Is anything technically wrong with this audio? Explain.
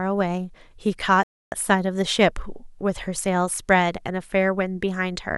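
Yes, there's a rebuffering stall from 1.23 to 1.52 s. The player ran dry of downloaded audio, so the speech drops to silence for about 0.29 s, then picks up exactly where it stopped. Nothing gets skipped; the clip just runs that much longer.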